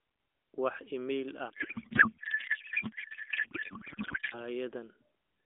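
From 1.50 s to 4.44 s a codec payload misread takes over: octet-aligned AMR frames are parsed as bandwidth-efficient, shifting every field. The speech dissolves into garbled warble and noise that barely tracks it. On a spectrogram, harmonic striations vanish into smeared energy within the 300 Hz to 3.5 kHz band.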